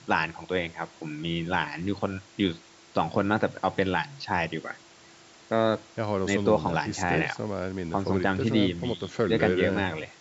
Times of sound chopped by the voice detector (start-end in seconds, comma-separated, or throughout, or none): none